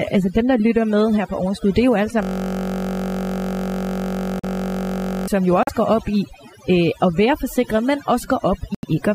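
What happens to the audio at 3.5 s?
At 3.5 s the playback system has frozen, a system hang loop running from 2.23 s to 5.28 s, just after "det er jo alle". The computer or its driver stopped supplying new audio while the sound hardware kept replaying the same small ring buffer. One 21.33 ms slice repeats exactly, well over a hundred times, which fits a 1024-sample buffer. Because the slice is so short, it fuses into a steady buzz at 46.9 Hz instead of a stutter.

Beneath that, and across the whole recording, overdone noise removal is also present. A noise reduction stage set far too aggressively cuts individual frequency bands down or out whenever they drop near its noise estimate, taking the quieter parts of the speech with them. The background drops and breaks up into twinkling specks.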